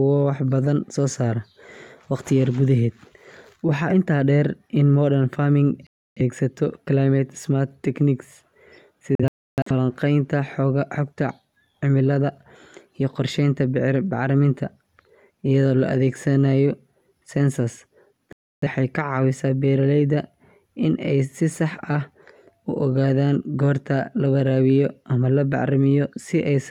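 Around 5.87 s the speech drops out for roughly 0.3 s, a classic digital broadcast dropout: the receiver stopped getting clean frames and muted until good ones returned, so that stretch is simply gone. At 9.15 s it breaks up into several short holes spread over about half a second, about 0.38 s lost in total, the longest gap near 0.3 s. Then at 18.33 s there's another clean 0.3 s cut before the speech comes back.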